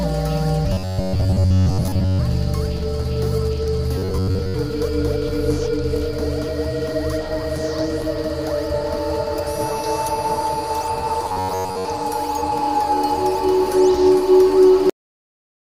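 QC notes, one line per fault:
0.73–2.20 s, 3.98–4.54 s and 11.24–11.85 s, robotic sound from repeated short buffers: new audio likely reached playback too slowly, so each gap was filled by looping the last short slice while most of the real signal, roughly two thirds or more, was skipped. The loop imposes a steady buzz at about 93.8 Hz, which fits slices near 10.7 ms long. The sound turns hard and metallic, and its overall shape only loosely follows the original.
14.90 s, cut-off end: the final stretch of audio was never written out or played, so the sound halts abruptly partway through rather than finishing or fading. No natural decay or room tail follows; the signal falls straight to digital silence, which holds unchanged through the remaining fraction of a second to the end. The sudden stop makes the clip feel chopped short instead of ended.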